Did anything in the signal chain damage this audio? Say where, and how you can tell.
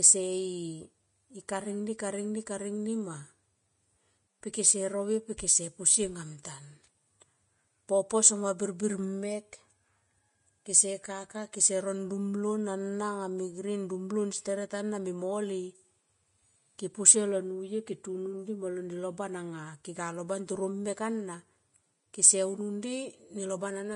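Yes, at the codec stage: the speech carries plainly audible damage from start to finish that likely comes from Vorbis compression at a low setting, consistent with roughly 30 kbps. Sibilants turn hissy and grainy, and consonant onsets smear. On a spectrogram, nothing appears above 10.6 kHz, a hard shelf across the whole clip, and the upper bands below it look speckled rather than smooth, because the fine treble detail is coarsely quantised into noise of similar energy.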